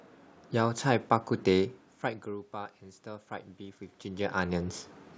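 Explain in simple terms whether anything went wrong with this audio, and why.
Between 2.26 and 4.49 s there's automatic gain rising: the input dropped, so the call's level control slowly turned things up, swelling speech and background together.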